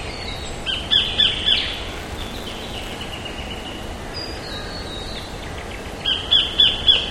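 From 1.88 to 3.03 s a steady robotic buzz at 188 Hz rattles through the sound. This is buffer tearing: writer and reader of the ring buffer have slipped, so a small slice of each period, which fits a 256-sample buffer, replays audio about 15 ms old.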